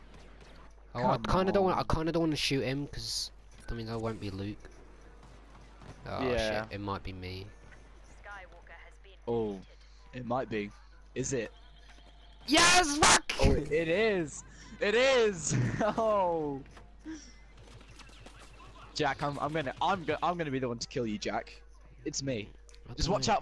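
Nothing is technically wrong with this audio.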